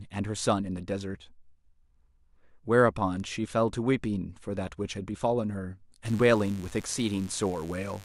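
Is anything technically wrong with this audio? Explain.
Yes. From 6.05 s to the end, a 50 Hz mains buzz sits well below the speech: switching spikes add harmonics into the kilohertz range, sounding raspy rather than like a smooth low hum.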